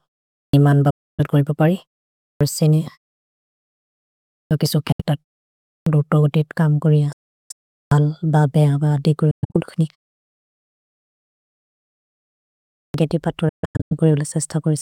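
Speech bursts out of silence with its opening sounds missing at 0.36, 2.24, 4.34, 5.68, 7.76 and 12.79 s. Each time, about 0.15 to 0.18 s is lost. This is a clipped start after a pause: the output device sleeps during silence and wakes too slowly.

Between these, sudden holes of silence cut into running speech at 0.90, 4.92, 7.13 (just after "कम् गोरि"), 9.31 and 13.49 s, lasting 0.07 to 0.37 s. The last two are broken into scattered short gaps. These are Bluetooth dropouts, likely caused by packets reaching the headphones too late and being discarded.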